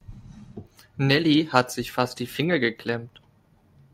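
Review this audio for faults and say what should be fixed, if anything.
No faults heard, so nothing needs fixing.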